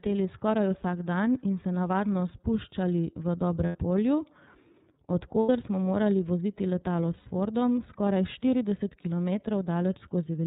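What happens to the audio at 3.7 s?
From 3.66 to 3.76 s, about 90 ms of the speech drops out and is covered by packet-loss concealment, the sound of lost iLBC frames. That span fits three consecutive 30 ms frames missing. The decoder fills the hole by repeating the last pitch cycle it received, blended with noise, so the gap comes out as a held, faintly buzzy, breathy vowel instead of silence. Because each iLBC frame is decoded independently, normal speech resumes almost immediately after 3.76 s.

The surrounding speech carries the iLBC codec throughout. The sound points to the 30 ms frame mode, roughly 13.3 kbps. Bandwidth is limited to narrowband, with nothing above 4 kHz, which removes the crispness of sibilants. The codec models the excitation frame by frame, and the coding damage is plainly audible as a slightly rough, synthetic quality on the speech around the concealed gap.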